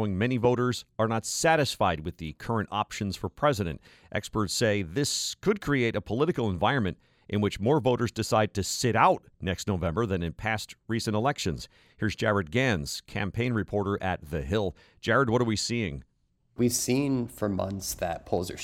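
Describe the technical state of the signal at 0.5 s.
A single sharp loud pop, roughly 10 dB above the speech, runs from 0.45 to 0.47 s, likely a brief voltage pulse from a switch, plug or static.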